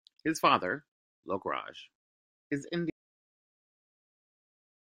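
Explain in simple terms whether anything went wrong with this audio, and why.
An audio dropout to silence begins at 2.90 s and lasts to the very end of the clip. The speech stops abruptly, and what follows is dead, total silence, with not even the faint background hiss of the room. That kind of absolute quiet means the recording kept running but received nothing. The likely cause is that the sound input was lost, perhaps through a microphone disconnecting, a link failing or an accidental mute, so anything said after that point was never captured.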